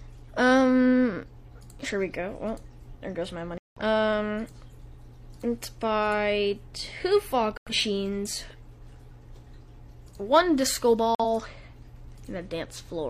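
Corrupt frame muted: sound cuts abruptly to silence at 3.58 s for about 0.23 s, at 7.57 s for 0.15 s, and at 11.15 s for 0.06 s, suggesting damaged frames the decoder rejected. Unlike a dropout, nothing after each gap shifts later.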